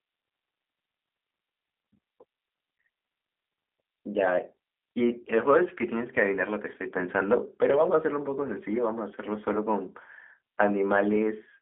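The speech has passed throughout through a low-rate G.729 codec, most likely the G.729A variant at 8 kbit/s. Each 10 ms frame is rebuilt from a vocal tract filter, a pitch predictor and a few coded pulses rather than the waveform itself, so the voice comes out plainly rough and slightly synthetic. The sound sits in a telephone band of roughly 300 Hz to 3.5 kHz, with nothing above 3.7 kHz.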